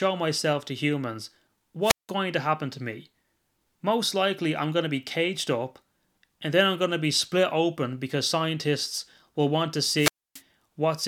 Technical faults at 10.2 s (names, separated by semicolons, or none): wireless microphone squelch dropout